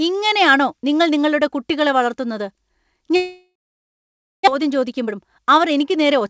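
A long network dropout is the likely cause of the gap from 3.16 to 4.49 s: the last sound trails off as a fading buzz, then about 0.89 s of silence follows, and the speech resumes with roughly a second of it gone for good.

A jitter buffer speed-up runs from 4.59 s to the end. Having built up a few hundred milliseconds of extra delay, the receiver trims many pitch-period slices, about 0.2 s in total. Speech plays about 11% faster at unchanged pitch and sounds hurried, over the G.722 call path's band ending at 8 kHz.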